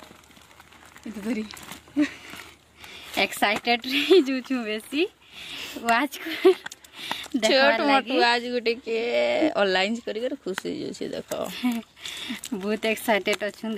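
Nothing stood out as a technical problem on listening to this audio.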